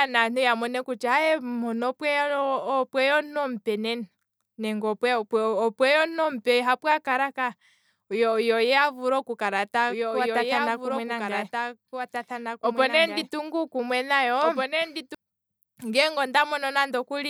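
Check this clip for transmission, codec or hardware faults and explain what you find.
One fault is present: a doubled audio track. Just after "oku kala", from 9.89 s to 15.15 s, a second copy of the speech runs underneath the original. It trails by roughly two seconds and sits about 5 dB lower. The copy is full-band and dry, with no echo tail or room sound. It appears and disappears abruptly. The likely cause is the signal being picked up again through a slower path, or an edit leaving two out-of-step copies.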